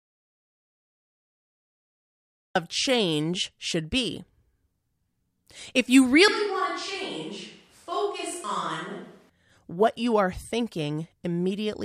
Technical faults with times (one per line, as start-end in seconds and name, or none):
0.00-2.55 audio dropout to silence
6.28-9.29 switch to a distant microphone